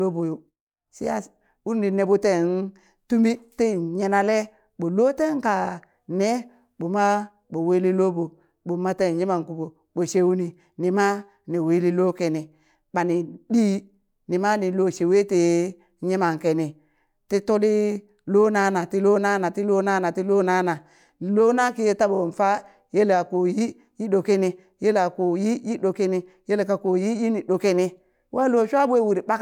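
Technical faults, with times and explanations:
22.14–22.19 s, repeated frames: right after "lona kiye", a short slice of sound about 26 ms long plays twice more, producing a quick stutter. A compressed frame was delivered or stored more than once, which fits a single 26.1 ms frame, and the decoder dutifully played each copy. The clip grows by about 52 ms.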